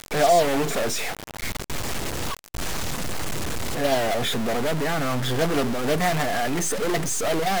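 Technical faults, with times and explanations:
Throughout, stuck bit: the speech carries a harsh, buzzy distortion, and the pauses between phrases are filled with a gritty noise rather than silence. The likely cause is one data bit held at a fixed value, so about half the samples jump by a step of roughly -25 dBFS. Unlike clipping, the distortion is not confined to loud peaks, and unlike ordinary hiss, the noise in the gaps has a rough, waveform-dependent texture.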